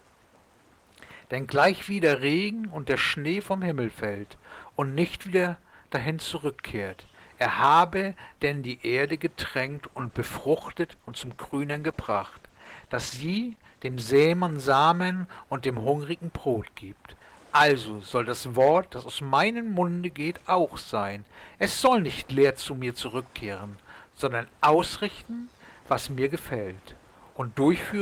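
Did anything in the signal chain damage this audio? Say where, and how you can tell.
Yes. From 9.67 to 14.15 s the sound turns coarse and rough, then clears. This is a call bitrate drop at the codec stage: the bandwidth estimate fell and the encoder coded with far fewer bits, which fits a drop from 32 to about 14 kbps.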